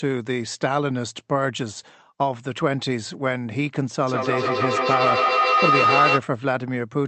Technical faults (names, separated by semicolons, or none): feedback howl